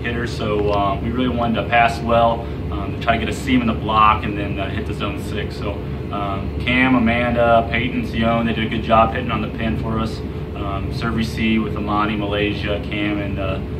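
Nothing technically wrong can be heard anywhere in the audio. The sound continues steadily from its opening to its close, with no point where it breaks or changes in an unexpected way.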